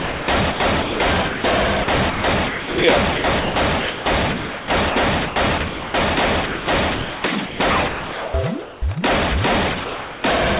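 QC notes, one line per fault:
0.00–5.94 s and 6.46–8.82 s, sound chopped by the voice detector: the sound repeatedly cuts out and returns, with 2.48 s replaced in the first stretch and 1.32 s in the second. The gaps are filled with synthetic hiss. The likely cause is the sender's voice detector toggling on and off, judging quieter sound as background and sending comfort-noise updates instead of audio.
9.84–10.24 s, sound dropped by the voice detector: 0.4 s of sound is lost outright and replaced by steady, featureless noise until transmission resumes. The likely cause is the detector taking quiet sound for background and stopping transmission, leaving the receiver to synthesise comfort noise for the gap. The fill stays band-limited like the rest of the call path, with nothing above 4 kHz, which fits a narrowband G.711-type codec.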